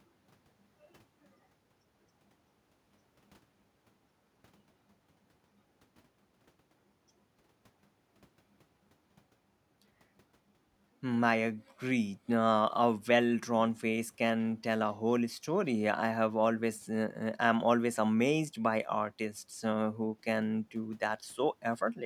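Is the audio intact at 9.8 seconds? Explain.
Yes, at 9.8 seconds the speech plays through intact, with no audible fault at that moment.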